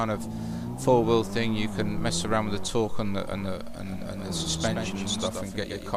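From 3.87 s to the end, every sound is followed by a second, full-band copy arriving about 150 ms later and roughly 5 dB quieter. The copy has no decay or room colour, and it switches on abruptly. This is a doubled audio track. The likely cause is that the same signal reached the mix twice, either through a second, slower capture path or through an edit that left two copies out of step.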